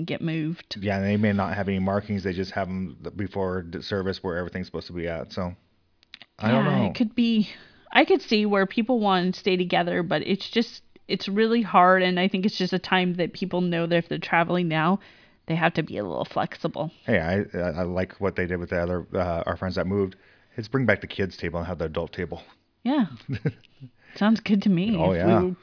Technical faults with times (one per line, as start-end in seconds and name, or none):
none